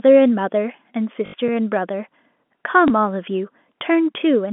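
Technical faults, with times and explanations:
1.26–1.34 s and 2.88–2.90 s, packet loss with last packet repeated: 80 ms and 20 ms of audio are replaced by a repeated packet, giving a buzzy robotic stutter in the first and a small blip in the second, both fitting 20 ms packets.
1.48 s, underrun with held sample: the waveform freezes flat for 4 ms, then playback resumes where it stopped, so the gap ends with only a soft click.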